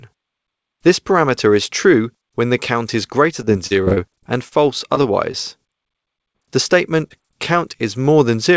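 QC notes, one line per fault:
3.42–4.53 s, repeated packet loss (robotic sound): the audio turns choppy and robotic, with pieces missing. A rapid string of gaps, the longest 37 ms, was each patched by stretching the preceding sound. About 15% of the span is this synthetic fill, which gives the robotic texture.
4.95–4.98 s, 5.32–5.35 s, 6.33–6.36 s, 7.08–7.12 s, short concealed packet loss: each is a brief smear or wobble where roughly 20 ms of audio never arrived. The receiver bridged the hole by continuing the last sound, then blended back into the real audio. The band-limited call sound, with nothing above 8 kHz, fits G.722 at 64 kbps.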